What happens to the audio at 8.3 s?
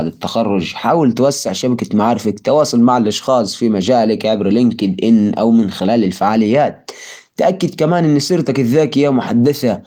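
Nothing goes wrong at 8.3 s: the speech there passes intact through the hybrid-mode Opus voice compression at 24 kb/s, which keeps the full band up to about 20.2 kHz and colours the sound only lightly.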